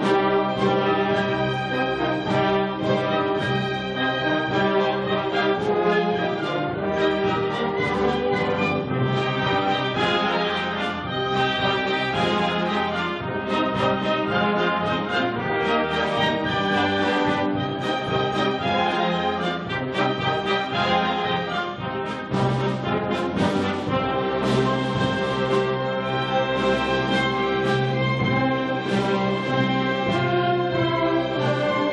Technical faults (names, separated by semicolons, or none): none